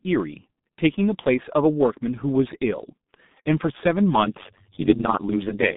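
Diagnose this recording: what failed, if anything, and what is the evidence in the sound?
The failure is at the codec stage: the speech went through G.723.1, an early low-rate internet-telephony codec, across the whole clip. Nothing reaches above about 3.8 kHz, and the line band sits near 150 Hz to 3.7 kHz, so sibilants and consonant edges are gone. The damage is heavy, which fits a bitrate near 6 kbit/s. The coder's coarse 30 ms frames and slowly updated voice model leave the speech muffled and hoarse, with smeared consonants.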